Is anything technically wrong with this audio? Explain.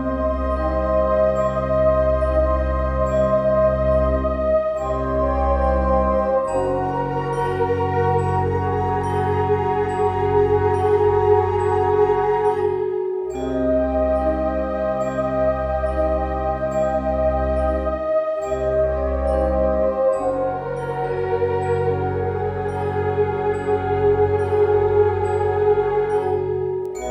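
No, nothing technically wrong jumps out here, and the audio sounds just fine all the way through.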